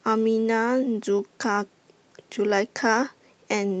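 Nothing technically wrong can be heard in this speech recording. It has passed through a call path whose top end stops at about 8 kHz, which fits an Opus call codec running at a moderate bitrate with its usual coding texture.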